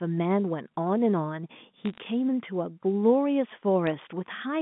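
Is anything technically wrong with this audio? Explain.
Yes. Bit errors on a digital phone line occur twice, from 1.85 to 1.98 s and again at 3.87 s. Flipped bits corrupt single samples of the A-law stream. When a sign or high bit changes, a sharp tick results, heard here as brief crackle.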